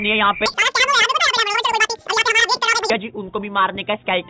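From 0.46 to 2.9 s there's a wrong sample rate: everything runs twice as fast and a full octave high, which fits 8 kHz audio played at 16 kHz.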